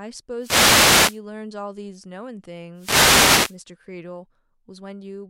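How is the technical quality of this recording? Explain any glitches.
Two wireless microphone noise hits mar the speech, from 0.38 to 1.21 s and from 2.75 to 3.58 s. Each is a brief swish of static as the FM radio link fades through reflection cancellation, unlike steady hiss or digital dropouts.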